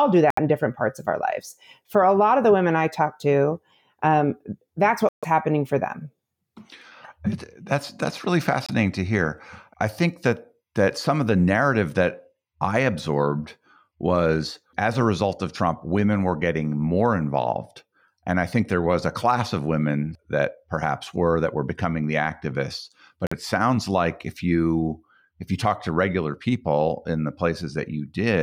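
Short silent holes cut into the speech at 0.30–0.39 s just before "in different parts of", at 5.09–5.25 s between "talked to um that's" and "happening for them", at 8.66–8.71 s, and at 23.27–23.33 s just before "it sounds like if". These are likely Bluetooth dropouts, where late packets were discarded. The gaps have hard edges or a fade of a few milliseconds, and the speech resumes further along, as if it had played on through the silence. It is not paused, repeated or smeared, which sets it apart from an underrun stall.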